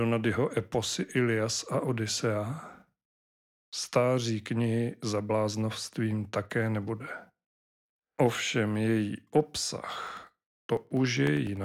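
From 10.07 to 11.57 s, periodic USB or driver dropouts cut roughly a millisecond of speech every 0.1 s. Regular ticks result.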